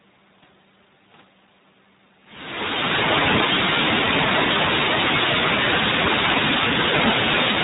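Speech passed through an iLBC codec, a narrowband VoIP coder whose 20 ms frames and rate point to the 15.2 kbps mode. Everything above 4 kHz is gone, leaving the speech plainly rough and synthetic. The fade-in from around 2 s to 3.18 s is smooth.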